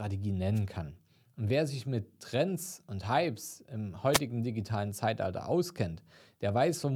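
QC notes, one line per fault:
0.55–0.60 s and 4.13–4.19 s, wireless microphone noise hit: the FM radio link from the microphone briefly faded as reflected signals cancelled, letting receiver noise rise over the speech, so each event is heard as a short swish of static lasting roughly 50 to 70 ms.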